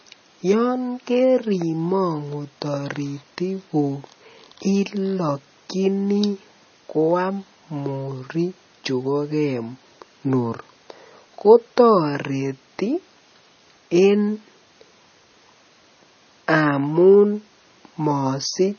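A speech recording with MP3 compression damage running throughout: nothing above about 6.6 kHz survives, and weak frequency lines flicker on and off, giving a watery, swirly texture. That flicker separates it from a plain low-pass, and the heavy damage likely reflects a bitrate near 24 kbps.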